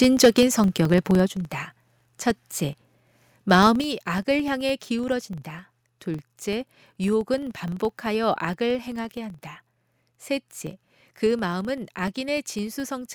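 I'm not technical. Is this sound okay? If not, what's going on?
No. Three things are wrong.

Filter restarted on every block: a processing step forgets where it was each time it handles a new chunk of audio, so a buzz of about 23 ticks per second runs under the voice for the whole clip, louder when the voice is louder.

Microphone overload: the microphone input was likely set too high, so from 0.02 to 0.43 s and again from 3.5 to 3.67 s the loudest moments have their tops chopped off and sound harsh and crackly.

Microphone volume stepped down: the call software likely turned the microphone down in sudden steps, so the voice and background drop abruptly at 0.25, 1.26 and 3.81 s, the first in the middle of a distorted stretch and the others after one.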